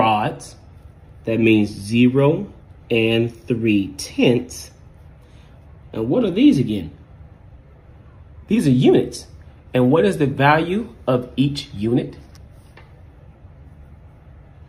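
No technical faults can be heard anywhere in it.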